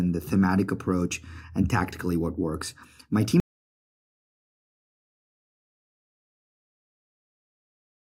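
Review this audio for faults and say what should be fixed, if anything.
At 3.4 s the speech cuts off mid-flow and an audio dropout to silence runs to the end of the clip. The input was likely lost through a disconnected device, a failed link or a stray mute while recording continued. Unlike a natural pause or a noise gate closing, the gap carries no room tone at all, and the speech never resumes, so the remaining content is gone. Monitoring the input live and securing cables, links and mute controls would prevent it.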